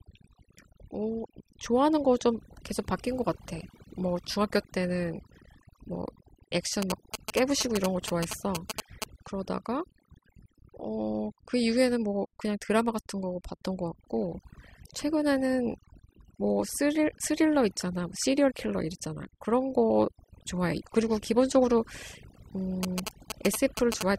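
Overdone noise removal runs throughout: an over-aggressive suppressor gates bands near its noise estimate, leaving the voice over near silence, with isolated twinkling specks scattered across an otherwise blank spectrogram background. From 6.82 to 9.04 s and again from 22.83 to 24.03 s, GSM signalling bursts from a nearby 2G phone leak in as galloping ticks and 217 Hz buzzing, only slightly quieter than the speech, seen as clustered vertical stripes and comb-like harmonics.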